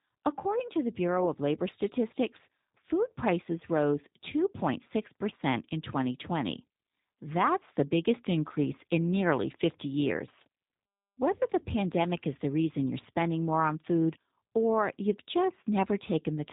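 From start to end the speech carries G.729 codec damage, plainly audible: a slightly rough, synthetic quality, consistent with 8 kbit/s coding that rebuilds each 10 ms frame from a vocal-tract filter, pitch predictor and few pulses. A spectrogram shows nothing above 4 kHz.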